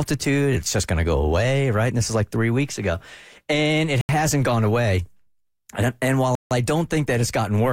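At 4.01 s the speech drops to silence for 79 ms, resuming just before "hasn't gone away"; at 6.35 s, right after "and while", a longer 158 ms gap follows before it picks up again. Both are most likely a Bluetooth stall: radio interference delayed packets, the headphone buffer emptied, and playback froze until retransmitted data arrived. Each gap is a clean cut to silence rather than a click or a garble.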